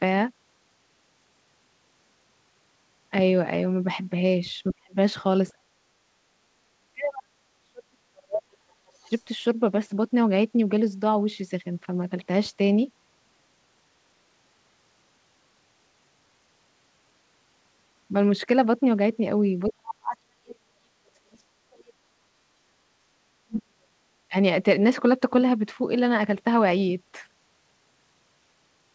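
From 4.73 to 4.96 s, and again from 5.5 to 8.58 s, speech suppressed in double talk: the echo canceller likely mistook simultaneous talk for loudspeaker echo and pulled the talker down, by roughly 35 dB, then roughly 40 dB across about three seconds. From 8.87 to 9.22 s, the other side's voice leaking through: residual loudspeaker echo the canceller likely failed to remove sits faintly underneath, around 40 dB below the speech. Inside that, from 9.02 to 9.11 s, a brief further dip of around 15 dB. From 19.68 to 21.94 s, the talker is again suppressed by around 40 dB for about two seconds. From 22.22 to 22.51 s, background gated by the echo canceller: the microphone was clamped while the loudspeaker played, so the room sound drops by about 21 dB for roughly a third of a second. Then from 23.35 to 24.05 s the talker sinks by around 40 dB, and at 24.28 to 24.36 s by around 25 dB. Throughout, nothing sounds above 8 kHz, which fits a wideband call codec such as G.722.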